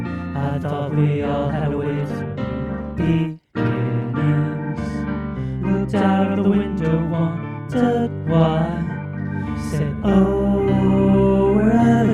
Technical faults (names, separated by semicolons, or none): call bitrate drop